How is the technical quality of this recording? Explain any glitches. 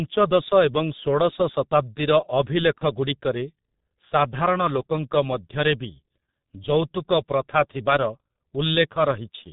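The recording has heavy low-bitrate codec damage throughout, plus one brief dropout.

G.723.1 codec, throughout: coarse 30 ms frames at a rate that fits 6.3 kbit/s discard everything above 4 kHz, leaving the speech muffled and hoarse with smeared consonants.

VoIP packet loss concealed by the speech codec, 2.78–2.83 s: roughly 30 ms of missing data, one frame's worth, was filled by extrapolating the previous pitch and filter, producing a short, fading smear.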